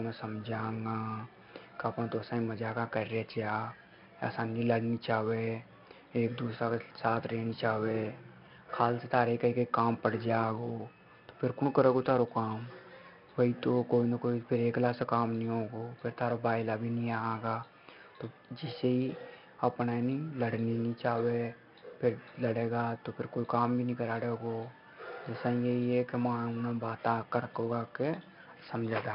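4-bit ADPCM compression runs through the whole speech clip, from start to finish. Each sample is coded as a 4-bit step away from a predicted value, with the step size adapting as it goes, and the damage here is heavy. A gritty hiss rides on every louder passage and rises and falls with the signal, and sharp onsets come out roughened. Nothing is present above 5.3 kHz, which leaves the speech dull, and the bandwidth and data rate together point to a sample rate near 11 kHz.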